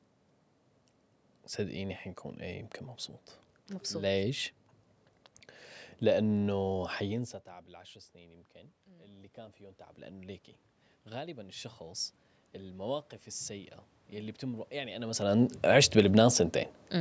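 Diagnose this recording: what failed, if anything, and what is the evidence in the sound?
Automatic gain rising in call processing: after the level drops about 19 dB near 7 s, gain climbs about 5 dB from 7.49 to 10.48 s, then about 8 dB from 11.1 to 15.58 s. The waveform envelope and the spectrogram's room-noise floor swell together.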